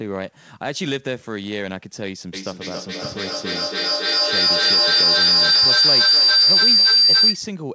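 Feedback howl runs from 2.33 s to 7.54 s. Sound leaking from loudspeaker back into microphone gains level each trip, so a tone near 5 kHz swells, with the loop repeating roughly every 0.3 s, peaking about 13 dB above the speech, within the 8 kHz call band.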